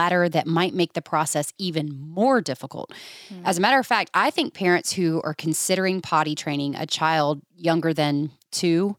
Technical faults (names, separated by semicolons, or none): none